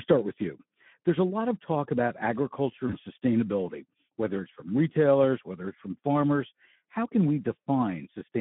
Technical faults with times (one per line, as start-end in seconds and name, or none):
0.00-8.41 Speex codec
2.87-2.93 VoIP packet loss concealed by the speech codec